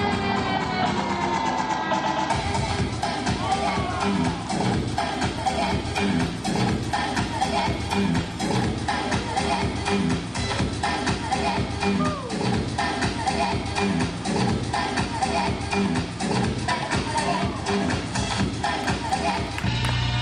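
From 4.66 to 8.66 s the audio abruptly degrades, with rising codec artefacts, then snaps back. No gap marks either edge, which identifies an adaptive stream at a lower bitrate rather than a dropout, consistent with a brief switch to a lower-bitrate encode.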